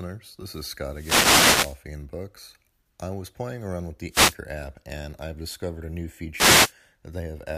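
Wireless microphone noise hits at 0.91–1.82 s, 4.09–4.37 s (after "was playing around with") and 6.33–6.73 s (after "I've discovered a new"): RF fades raise receiver hiss, showing as broadband spectrogram smears and fuzzy waveform bursts.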